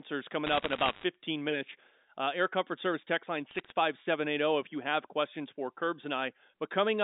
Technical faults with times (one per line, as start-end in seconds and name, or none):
0.47-1.04 bit errors on a digital phone line
3.51-3.72 bit errors on a digital phone line